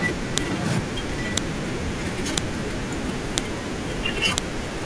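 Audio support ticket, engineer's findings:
Sharp, loud click/snap at 0.38, 1.38, 2.38, 3.38 and 4.38 s in the speech. Evenly spaced, 1.0 s apart, each about 1 ms, independent of the speech level. File header played as audio: stream assembled from 1 s WAV chunks with each chunk's header left in, so the header bytes get decoded as samples at every chunk boundary. Probable component: chunk concatenation/streaming layer. Fix: strip headers before joining.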